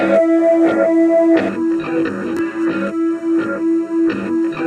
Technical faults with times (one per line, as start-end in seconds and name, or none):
1.49-4.66 channel delay (comb filtering)